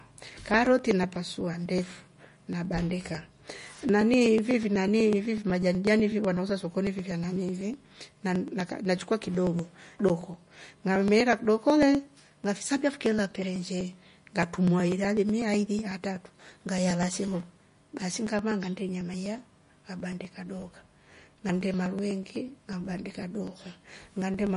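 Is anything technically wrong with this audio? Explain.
Yes, two faults are audible.

Likely MP3 compression, throughout the clip: nothing is present above 10.6 kHz, and the speech has a plainly audible watery, swirling quality, with chirpy smearing on sibilants and consonant attacks. That fits a lossy encoder starved of bits, at a low rate around 40 kbps, so it drops the top octave entirely and lets weaker frequency components flicker in and out between frames.

Periodic USB or driver dropouts, from 0.17 s to 24.47 s: a regular tick recurs every 0.124 s, around two hundred in all, heard only while the speech is sounding. Something in the playback or capture path is stalling at a fixed interval, and each stall skips roughly a millisecond of audio outright rather than filling it with silence. The splice where the waveform jumps ahead is what produces each click.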